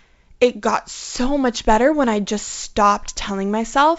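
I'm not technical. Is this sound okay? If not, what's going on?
Yes, the speech comes through as ordinary wideband telephone audio, with G.722 coding keeping it clear up to about 7 kHz and leaving at most a faint hiss in the highest range, and nothing in it sounds faulty.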